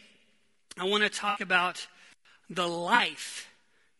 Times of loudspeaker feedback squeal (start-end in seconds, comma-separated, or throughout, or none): none